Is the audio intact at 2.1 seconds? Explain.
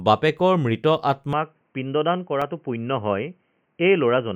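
No. From 1.33 s, right after "বাপেকৰ মৃত", to the end, the input likely switched to a poorer device. The speech turns dull and boxy, with nothing above 3.1 kHz. It drops about 5 dB, gains faint new noise, and has no gap at the switch.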